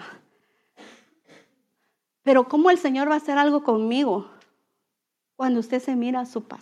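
No technical faults can be heard anywhere in the recording. There is no moment in it that needs a time or a measurement noted.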